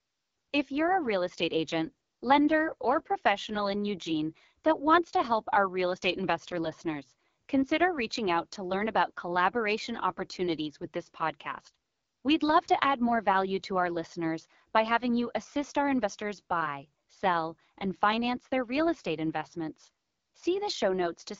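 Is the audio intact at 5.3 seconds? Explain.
No. At 5.3 s, as throughout the clip, the speech carries AMR wideband (HD Voice) codec damage. At 8.85 kbit/s, the second-lowest AMR-WB rate, the pulse-driven vocal tract model has too few bits to follow the speech waveform, so the sound comes out plainly rough and raspy. Above 6.4 kHz the codec substitutes shaped noise rather than real detail, and nothing is present above about 7.3 kHz.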